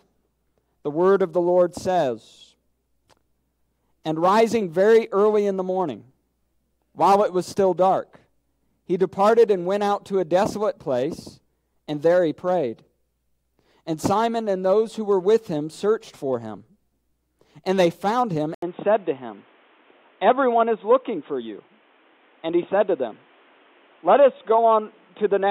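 At 18.54 s, an 80 ms gap. After it, nothing above 3.8 kHz, plus faint new noise. Likely the input switched to a poorer device.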